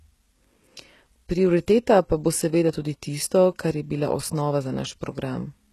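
Throughout, the speech has a gritty, metallic top end, s sounds turn lispy, and there is no content above 12.3 kHz. The likely cause is HE-AAC compression near 16 kbps, which rebuilds the treble by copying lower bands upward, so its harmonics no longer line up.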